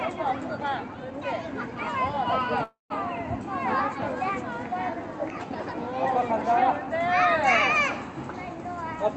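At 2.63 s the sound freezes until 2.92 s. A smeared fade into silence fills the gap, likely a call audio freeze from delayed packets. Playback then resumes intact.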